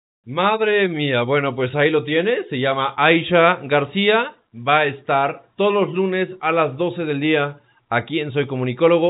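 No technical faults can be heard anywhere in this speech clip.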